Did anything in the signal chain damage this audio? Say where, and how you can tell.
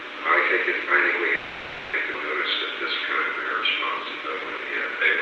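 Yes. At the network and jitter-buffer stage, there is a call audio freeze from 1.35 to 1.95 s. The last sound is stretched into a fading buzz or hiss for about 580 ms. Then the audio resumes where it stopped. The likely cause is late packets draining the buffer.

There is a skip ahead at 2.13 s. Playback jumps forward with almost no gap, roughly 400 ms of audio is gone, and the two sides are spliced together. A stretch of audio was dropped while later audio was already queued.

A jitter buffer slow-down runs from 2.47 s to the end. The audio plays at 87% speed with unchanged pitch, adding 367 ms. Sounds are drawn out. The buffer repeated pitch periods to rebuild its reserve, on top of the Opus coding's 12 kHz bandwidth limit.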